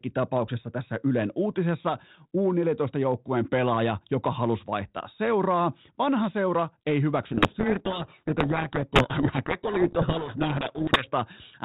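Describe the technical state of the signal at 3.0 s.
At 3.0 s the speech is intact, with nothing wrong with the signal at that point.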